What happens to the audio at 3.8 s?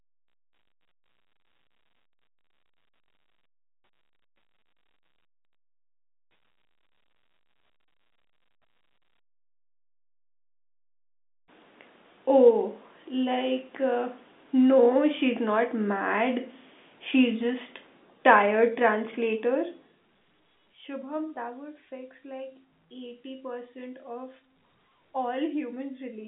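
Nothing goes wrong at 3.8 s: the speech carries on intact through that moment, with the narrow telephone band of the G.711 line and its gentle level changes working as they should.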